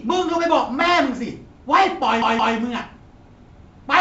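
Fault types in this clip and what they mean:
Bit errors on an ADPCM link: From 0.81 to 0.94 s, flipped bits, at roughly a few in a thousand, throw off the decoder's step size and predictor, so each error rings on as a pop or rough burst. The waveform shows spiky level jumps; the spectrogram shows broadband vertical smears.
Repeated buffer: From 2.22 to 2.56 s, a 170.67 ms stretch of speech plays two extra times, which fits an 8192-sample buffer, and little or nothing is skipped. It is heard as a stutter. The waveform and spectrogram show identical blocks repeated, with hard seams at each join.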